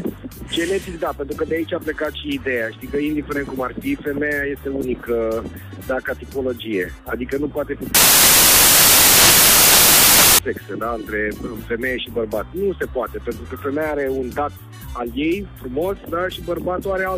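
From 7.95 s to 10.39 s the audio breaks into loud, harsh broadband noise. This is samples built from the wrong bytes. The reader assembles each sample's bytes incorrectly, whether shifted by one byte, swapped in order or misaligned. The rapidly changing low bits end up as the dominant part of every value. The result is a noise that swamps the sound.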